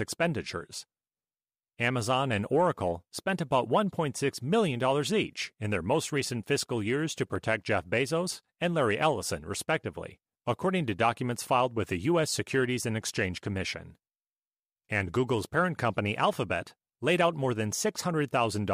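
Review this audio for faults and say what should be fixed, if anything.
A single sharp click at 7.36 s in the speech, likely from dropped samples: a fraction of a millisecond is missing, so the waveform jumps abruptly between values, showing as a thin vertical line across the spectrogram. Prevent it with adequate buffering and stable clocking in the capture chain.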